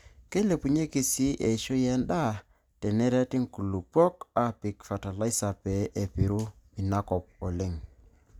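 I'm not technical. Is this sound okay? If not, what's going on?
Yes, nothing stood out as a problem when listening to this recording.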